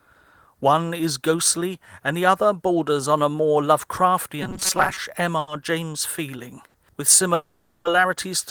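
Speech runs through a network call path here, and the receiving side runs short of audio several times. From 4.42 to 4.98 s the likely cause is that new audio arrived too seldom, so the software kept replaying one very short stretch to cover the shortfall. That is robotic sound from repeated short buffers. A repeat rate of 188 Hz fits a buffer of roughly 5.3 ms, and the repetition imposes a fixed, metallic buzz at that pitch. About half of that passage is recycled material rather than fresh audio, yet the buzz still loosely tracks the speech. At 5.39 to 5.50 s and again at 6.68 to 6.77 s, a packet turned up late and the jitter buffer emptied briefly, giving a short stall from a late packet each time. The receiver held the last sound for about 80 ms in the first case and 60 ms in the second, then resumed exactly where it had stopped. Nothing is lost, but a sound lingers unnaturally with a faint buzzy sag. 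From 7.34 to 7.88 s comes a call audio freeze, likely caused by packets held up in transit long enough to drain the buffer. The last sound is stretched into a fading buzz or hiss for about 510 ms without ever dropping to silence. Playback then picks up from the same point, so the speech is delayed rather than cut.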